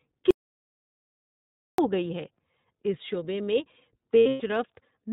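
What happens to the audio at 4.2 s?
From 4.18 to 4.51 s there are lost iLBC frames. Packets drop out in bursts, the longest around a tenth of a second. The decoder repeats the last pitch cycle blended with noise, giving a held, buzzy, breathy vowel rather than silence, and the speech snaps back cleanly once packets resume.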